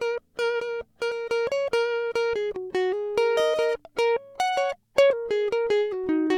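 At 1.10 s and again at 5.09 s the music jumps forward, skipping roughly 0.3 s and then about a tenth: compressed frames skipped, whole frames lost or rejected by the decoder.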